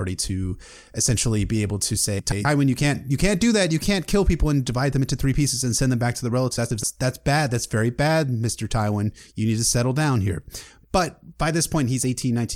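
Two adjacent runs of frames, each about 128 ms and consistent with four frames apiece, were delivered and decoded in swapped order at 2.19–2.45 s and again at 6.58–6.84 s. Each stretch of speech plays with its halves exchanged, a garbled flutter.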